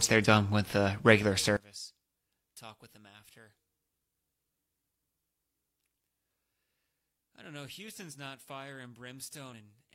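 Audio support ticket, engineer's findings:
Speech level collapses from 1.57 s to end, about 29 dB down, faint residue only. Likely one channel inverted: polarity flip cancels the shared centre content on mono summing.

Jump at 9.49–9.54 s, around 40 ms missing. Compressed frames skipped: decoder drops about one 42.7 ms frame, and the audio jumps ahead at the join.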